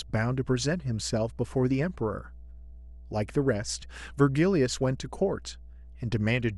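Mains hum runs under the speech from start to finish. It is a steady low tone at 60 Hz, sitting roughly 20 dB below the speech. A ground loop or a nearby transformer has let the power line leak into the signal.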